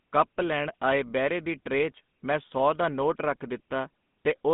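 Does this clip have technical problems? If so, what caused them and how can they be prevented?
Yes. GSM full-rate codec damage runs throughout. Nothing passes above 3.8 kHz, and the sparse pulse excitation adds a buzzy, gravelly roughness, which fits a 13 kbps coder. Prevent it by recording through a wideband path instead of a GSM call.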